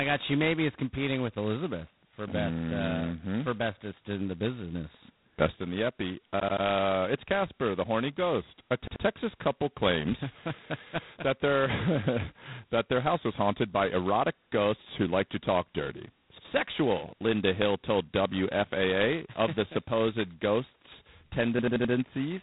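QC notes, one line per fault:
Throughout, G.726 ADPCM: there's a heavy, rasping hiss riding on the speech that rises and falls with its level, and nothing comes through above 3.9 kHz. Squeezing each sample down to a couple of bits of prediction error leaves coarse steps, which fits 16 kbit/s.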